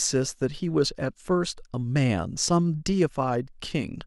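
Listening to this short speech recording, nothing technically amiss stood out at any point.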